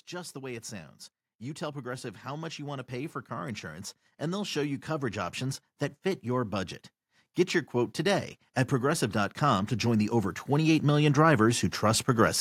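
Speech with automatic gain rising twice, from 1.58 to 6.81 s by about 9 dB and from 7.71 to 11.55 s by about 8 dB. Voice and background swell together as the gain control lifts quiet input.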